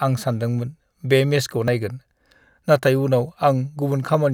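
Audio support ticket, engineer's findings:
Slight forward skip in the speech at 1.68 s, right after "सानदोंमोन बे मेचखौ", and again at 2.58 s. No silence; the two sides are butted together. Likely a dropped buffer (overrun): capture was not read in time, so around 10 ms, then around 20 ms, was overwritten and lost.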